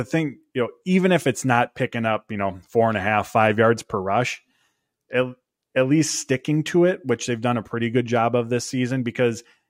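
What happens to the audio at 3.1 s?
Nothing goes wrong at 3.1 s; the speech carries on intact through that moment, with no dropout, click or distortion.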